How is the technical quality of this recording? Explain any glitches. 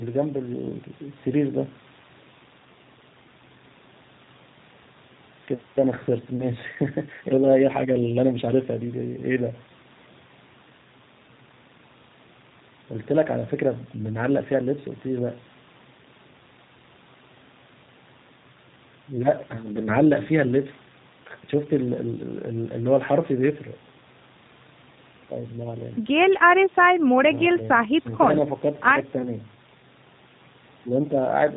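The technical quality is limited by one fault: low-bitrate speech coding, plainly audible across the whole clip.

G.729 codec, throughout: the speech has been rebuilt from a compact model (a vocal tract filter, a pitch predictor and a handful of pulses per 10 ms frame) rather than carried as a waveform, with the sound pointing to an 8 kbit/s rate. Everything above 4 kHz is gone, so sibilants lose their edge, and the voice comes across as rough, slightly buzzy and synthetic while staying intelligible.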